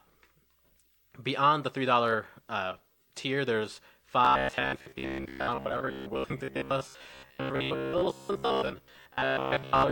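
Speech with robotic sound from repeated short buffers from 4.25 to 9.91 s, a fixed 66.8 Hz buzz likely from a roughly 15 ms block being replayed. Unlike a codec warble, most of the audio is skipped, not smeared.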